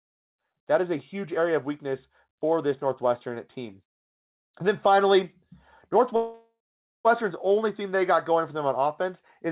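From 6.16 to 7.07 s a call audio freeze stretches the last sound into a fading buzz, then 0.47 s of silence. It shows as a smeared band tapering into a blank gap before the audio resumes, likely from a starved jitter buffer. The spectrum stays capped at 4 kHz by the G.711 path.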